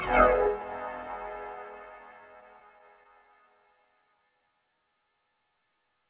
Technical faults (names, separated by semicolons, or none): scattered short gaps